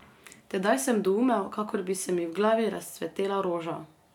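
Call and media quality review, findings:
No audible faults found in this speech recording.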